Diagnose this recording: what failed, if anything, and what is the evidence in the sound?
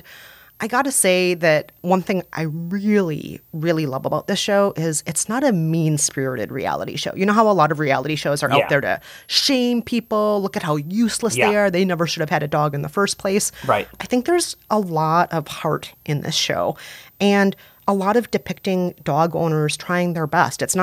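A switching supply whistle runs under the speech for the whole clip, a fault in the analogue stage where power-supply noise reaches the signal path. A thin, high whistle sits around 15 kHz, roughly 35 dB below the speech, its pitch ranging between 11.26 and 15.72 kHz. On a spectrogram it shows as a narrow horizontal line near the top, wandering within that band independent of the speech. A switch-mode regulator running in audible burst mode, or beating with another supply, would produce exactly this.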